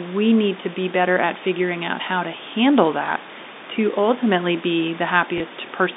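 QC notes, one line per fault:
3.06 s and 5.38 s, packet loss with last packet repeated. Right after "out how to handle" and "to ultimately be", a 20 ms gap is filled by replaying the previous stretch, which fits a single lost 20 ms packet. Each single repeat sounds like a small blip.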